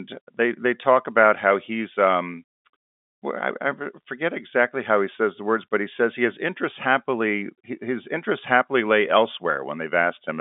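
There are no technical faults to describe in time order in this speech, which comes over a telephone line band with nothing above about 3.7 kHz.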